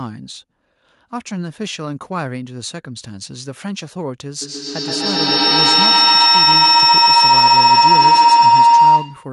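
Feedback howl from 4.42 s to the end: the speaker-to-microphone loop gains level each pass, swelling into a tone near 1 kHz, the loop repeating roughly every 150 ms, peaking about 16 dB above the speech.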